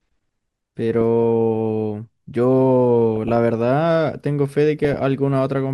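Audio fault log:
1.23 s, 3.16–3.37 s and 4.85–4.97 s: DAB burbling. Short bursts of noise blips sit over the speech, consistent with a weak-reception error rate of a fraction of a percent reaching the MP2 data. Corrupted samples put blips of noise into single sub-bands, and corrupted scale factors make sub-bands jump in level for up to a frame.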